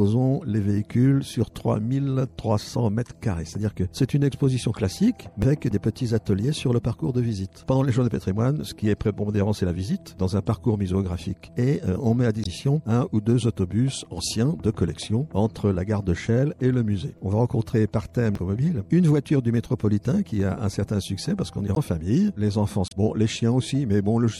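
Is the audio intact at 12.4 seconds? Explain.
No. From 12.42 to 12.47 s there is damaged data in a compressed stream: the decoder misreads corrupted frames and resyncs, giving a brief glitch. Throughout, the sound is also watery, likely MP3 compression at a low bitrate around 64 kbps, a steady smear rather than a single blip.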